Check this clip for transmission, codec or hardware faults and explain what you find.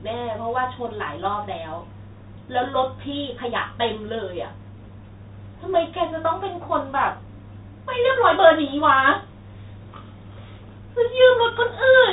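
There's one fault, and it runs the whole way through. Throughout, that's the Bluetooth CVSD headset codec: its adaptive one-bit up/down steps can't keep up with sharp sibilants and pass nothing above 3.8 kHz, leaving scratchy s sounds over a grainy hiss.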